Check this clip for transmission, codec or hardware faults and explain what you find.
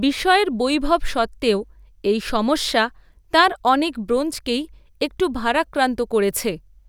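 No faults found here.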